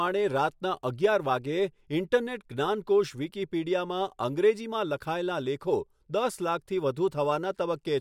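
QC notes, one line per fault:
No problems stood out on listening to this speech.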